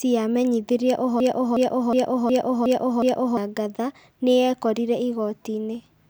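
From 1.20 to 3.37 s a broken-record loop replays one 0.36 s fragment six times, identical copies unlike decaying echo, likely from a stalled stream.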